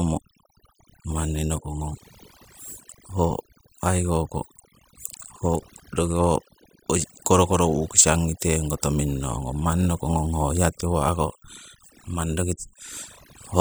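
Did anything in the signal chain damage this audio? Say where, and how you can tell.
Yes. A noise reduction stage in the processing chain was set far too aggressively, and the result is overdone noise removal across the whole speech clip. Each frequency band that sits close to the suppressor's noise estimate gets pulled down hard or gated off, so the softer parts of the voice are removed along with the background noise. You can hear it in the pauses, which fall to near silence and break up into twinkling, warbling specks.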